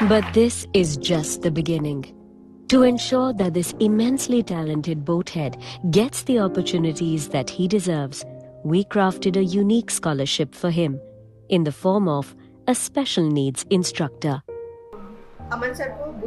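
From 0.63 to 7.35 s, a call bitrate drop to about 12 kbps leaves the sound coarse and muffled; the spectrogram's upper band disappears until recovery.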